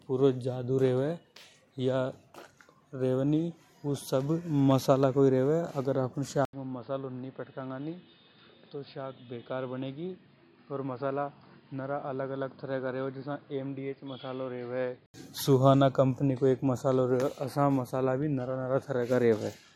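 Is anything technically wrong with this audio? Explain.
Yes. From 6.45 to 15.14 s the speech turns dull and boxy, then clears again. An 80 ms silence marks the first switch. Nothing passes above 5 kHz. The level drops by roughly 10 dB, and new background noise appears, roughly 30 dB below the speech. The likely cause is an input switched to a poorer, narrower-band device.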